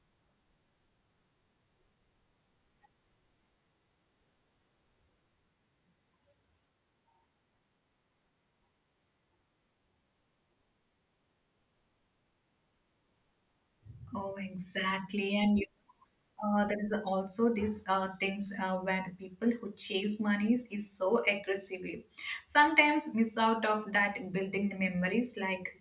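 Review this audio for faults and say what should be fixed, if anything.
No faults turn up in this speech recording, so nothing needs to be fixed.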